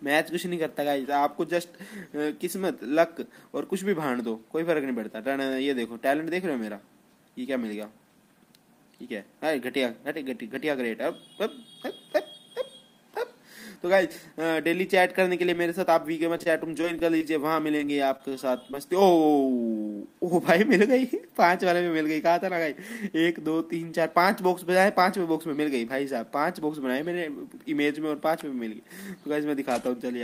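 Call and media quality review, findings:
Repeated packet loss (robotic sound), 16.37–17.25 s and 17.77–18.33 s: choppy texture with pieces missing. Seven then four gaps, longest about 27 ms, roughly 12–15% of each span concealed. Jitter buffer/decoder concealment repeatedly extrapolating last sound over lost or late packets.

Short concealed packet loss, 18.71–18.75 s: brief smear/wobble. Receiver-side concealment filled about 15 ms by continuing prior sound, then crossfaded back into real audio. Isolated single loss following the earlier burst pattern; a short transient may be lost.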